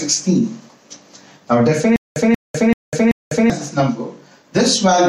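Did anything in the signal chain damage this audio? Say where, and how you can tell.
Yes. From 1.96 s to 3.50 s there is a stutter with silent gaps: the same 185 ms burst of sound repeats four times at a steady pace of about one every 384 ms, each repeat followed by roughly 199 ms of dead digital silence. The likely cause is a stall at the playback or streaming buffer, where each retry replayed the last fragment and then ran dry. The audio that belonged in that stretch is lost.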